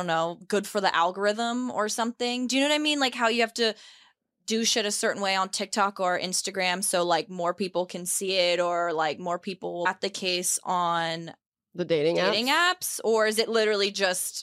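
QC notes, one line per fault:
9.85 s, stream segment skipped: right after "like more people will" the audio jumps straight to "the case on", with a tiny blip at the join and the sentence clearly broken. Most likely one chunk of the segmented stream failed to load and the player just moved on to the next one, so whatever sat between those two points is gone rather than delayed, and you hear a hard splice instead of a pause.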